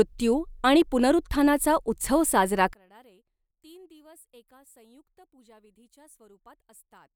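From 2.73 s, after "आणि पुनरुत्थानाचा उत्सव साजरा", the speech falls about 32 dB to a thin residue until the end, likely one channel inverted cancelling in mono.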